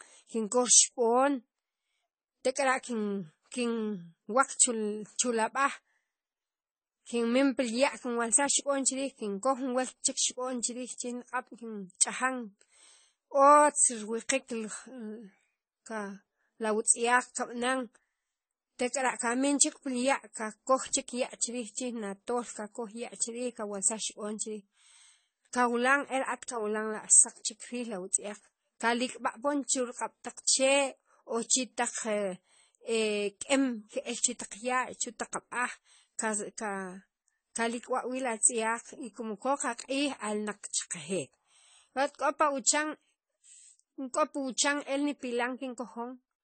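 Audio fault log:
throughout, transcoding between lossy codecs: nothing above 8.6 kHz, stacked smeary and swirly artefacts, likely low-bitrate AAC re-encoded as MP3, each adding damage.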